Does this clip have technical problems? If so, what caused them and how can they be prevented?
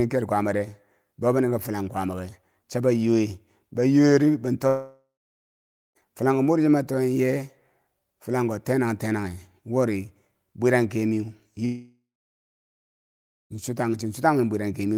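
Yes. Two long network dropouts, likely from stalled packet delivery, hit at 4.67 to 5.97 s and 11.65 to 13.52 s. The receiver stretched the last sound into a fading buzz, then went silent for 0.88 s and 1.49 s, and speech resumed with that stretch lost. A steadier connection with retransmission would prevent this.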